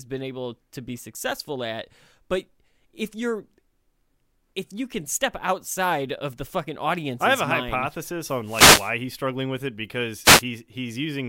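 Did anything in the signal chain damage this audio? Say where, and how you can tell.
Yes, at the wireless radio link. Two wireless microphone noise hits, at 8.43–8.93 s after "have a mind hypothesis" and at 10.23–10.43 s after "he's struggling with it", come through as static swishes. The FM carrier faded and receiver noise rose over the voice. A network dropout would leave silence instead.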